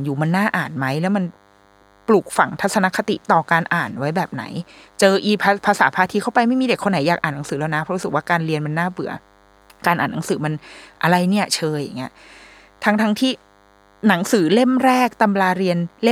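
A thin, steady buzz at 100 Hz with many harmonics runs under the speech throughout. It sits low, well beneath the voice, and is DECT cordless phone buzz: a nearby handset or base sends radio bursts every 10 ms that the audio circuit rectifies.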